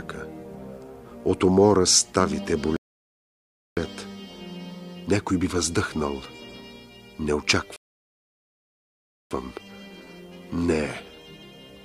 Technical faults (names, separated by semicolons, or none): rebuffering stall